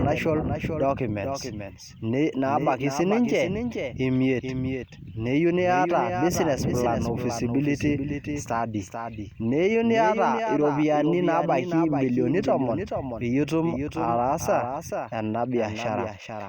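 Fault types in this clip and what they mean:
doubled audio track: a second full-band copy of the speech trails roughly 400 ms behind, about 5 dB quieter, with no decay or room colour, likely from a slower second capture path. Spectrograms show each syllable pattern repeated intact, shifted right. Waveform bursts recur at that offset.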